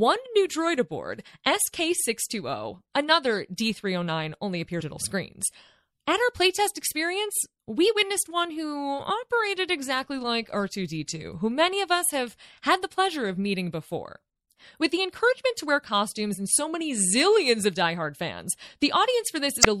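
From the start, the speech has a watery, swirling quality, with sibilants turning into metallic chirps and consonant onsets smeared. The likely cause is MP3 compression at a low rate, which fits around 64 kbps. Short of bits, the encoder cuts the treble at a fixed frequency and keeps switching weak frequency lines on and off between frames. On a spectrogram, this shows as a hard ceiling across the whole clip, with patchy, flickering blocks beneath it.

At 4.80 s a brief blip breaks through, a glitch lasting under 20 ms. At 19.61 to 19.66 s a longer glitch follows, about 50 ms. Both are damaged data in a compressed stream: corrupt bytes make the decoder misread or discard frames, lose sync and hunt for the next frame header, so the audio can jump slightly ahead. A waveform shows a sudden discontinuity at each point.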